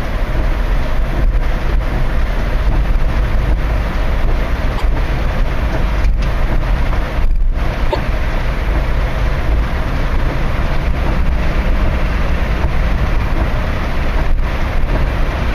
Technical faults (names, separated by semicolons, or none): broken MP3 bit reservoir